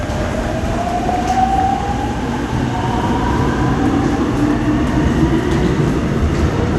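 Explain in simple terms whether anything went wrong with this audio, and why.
The audio was likely squeezed by heavy MP2 compression, which shuts off upper bands. Throughout, it sounds dull, with nothing above 12.2 kHz, plus a gurgling, grainy texture.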